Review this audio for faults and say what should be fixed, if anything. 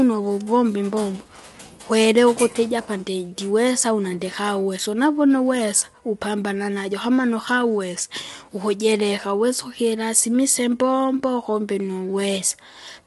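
Low-delay AAC compression runs through the whole speech clip. The voice sounds rough and grainy, with plainly audible codec damage, and nothing is present above 11.6 kHz. Short codec frames resolve the harmonics of the voice poorly, so noise fills the gaps between them. The damage fits a bitrate of around 32 kbps, likely from AAC-ELD. On a spectrogram, harmonic lines look smeared, with speckled energy between them and a flat ceiling at 11.6 kHz. Prevent it by raising the bitrate or recording before the call codec.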